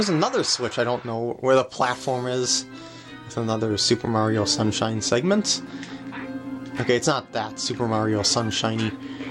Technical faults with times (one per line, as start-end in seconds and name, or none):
none